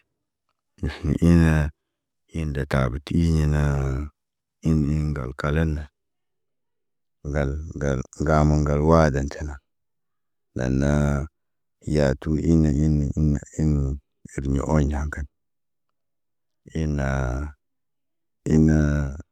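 Nothing technically wrong turns up anywhere in this stretch of speech, so there's no fault to point to and no time or cause to give.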